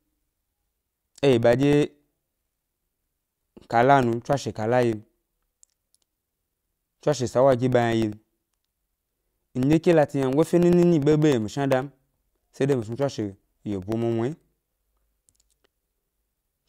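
From 0.13 to 16.6 s, periodic USB or driver dropouts gap the speech every 0.1 s. About a millisecond goes silent each time, heard as steady ticks.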